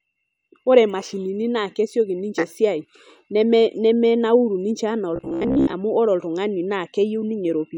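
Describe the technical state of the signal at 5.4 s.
Robotic sound from repeated short buffers runs from 5.16 to 5.73 s: likely starved playback looping a roughly 15 ms slice, imposing a rigid 66.7 Hz metallic buzz over most of the speech.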